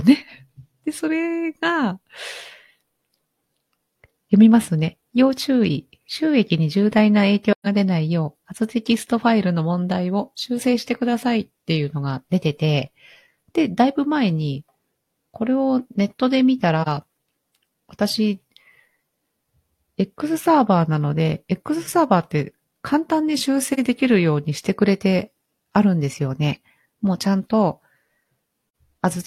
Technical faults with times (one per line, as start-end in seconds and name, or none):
7.52-7.67 AAC frame loss with muting
16.82-16.88 AAC frame loss with muting
23.73-23.79 AAC frame loss with muting
28.65-28.74 AAC frame loss with muting